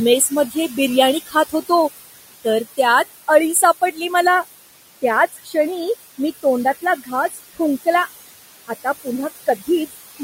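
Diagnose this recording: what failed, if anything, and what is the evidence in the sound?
Noise suppressor artifacts, from call processing: throughout, the room noise (about 14 dB under the speech) sinks by about 16 dB between phrases and swells back beneath them. Gating would switch the noise broadband, but this varies band by band.

Pre-emphasis left on, from the analogue or transmission chain: from 0 to 4.27 s the treble is about 14 dB hotter at 10 kHz than at 1 kHz, sibilant and thin. That matches a 75 µs FM curve with no de-emphasis. A plain EQ tilt would not end abruptly like this.

Speech cut by the noise suppressor: at 0.2–0.72, 1.25–1.7, 3.53–3.98, 5.02–5.55, 6.82–8.08 and 9.46–10.21 s, soft consonants and endings sag by about 9 to 18 dB, with about 150 to 200 ms affected in each. Unlike network dropouts, nothing goes silent. The weak parts fade along with the background.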